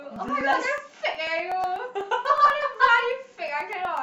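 From 0.16 s to 3.97 s the speech is broken by periodic USB or driver dropouts: roughly every 0.123 s a couple of milliseconds of audio are skipped outright, around thirty times, leaving a steady train of small ticks that sound only where there is signal.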